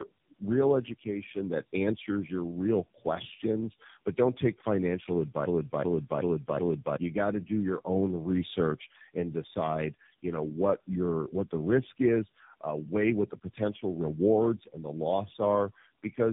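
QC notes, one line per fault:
throughout: tandem speech coding. The speech is rough, muffled and warbly, as if it passed through about three low-rate speech codecs in a row, with each one re-coding the previous one's degraded output. The final stage sounds like AMR-NB. The errors stack up at each step, so the quality falls below what any single coder would give. On a spectrogram the energy stops sharply at about 3.7 kHz, and the harmonics look smeared and patchy. The waveform shows normal level but blurred detail.
5.46–6.97 s: broken-record loop. A 377 ms fragment repeats exactly, back to back, four times, and the audio that belonged in that span never plays. The likely cause is a player, encoder or stream that stalled and kept resending the last fragment it held. On a waveform the same envelope shape tiles identically at 377 ms intervals. On a spectrogram an identical block repeats, with abrupt seams at each join.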